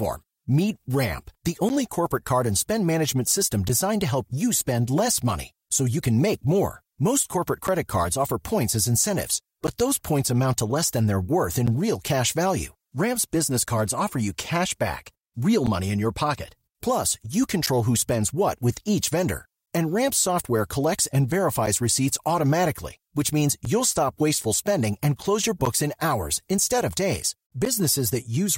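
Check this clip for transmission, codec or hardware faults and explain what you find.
The clip has one fault: periodic USB or driver dropouts. From 1.69 s to 27.66 s, about fifteen short gaps occur every 2.0 s. Each time, the audio path stalls and roughly 10 ms of speech drops to silence. These are heard as regular ticks during speech.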